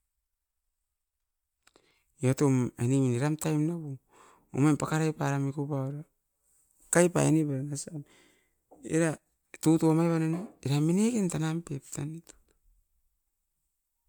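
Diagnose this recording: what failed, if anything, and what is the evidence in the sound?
Nothing failed: no stage of the chain, from capture through playback, leaves any audible fault in the speech.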